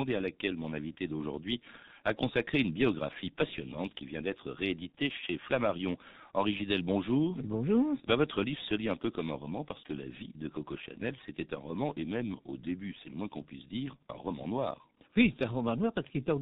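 G.723.1 codec damage runs throughout the speech. Nothing passes above 4 kHz, and the coarse 30 ms voice model, heavy at what sounds like about 6 kbit/s, leaves it muffled and hoarse with blurred consonants.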